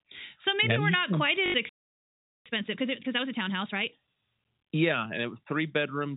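From 1.46 to 1.54 s comes packet loss with the last packet repeated. About 80 ms of audio went missing, which fits four lost 20 ms packets, and one stretch was replayed to fill it. It sounds like a brief robotic stutter with a buzz near 50 Hz. On the waveform it shows as identical repeating blocks with small discontinuities at each join. A spectrogram shows evenly spaced vertical click lines.

A playback stall follows at 1.69 s. The sound cuts off mid-flow and stays silent for about 0.76 s, until 2.46 s. The likely cause is a player that ran short of data or had its audio thread blocked. On the waveform it is a near-flat line, and on the spectrogram an empty gap across all frequencies.

From 2.46 to 3.98 s a time-compressed catch-up runs at 1.5 times normal speed. The player trims small pieces and cross-fades the remainder to clear its backlog. The speech sounds hurried with unchanged pitch. 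In the spectrogram, syllables and formant movements look squeezed closer together while harmonic spacing stays the same.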